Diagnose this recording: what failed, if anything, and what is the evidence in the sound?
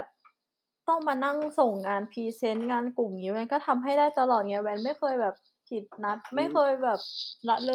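No fault is audible here.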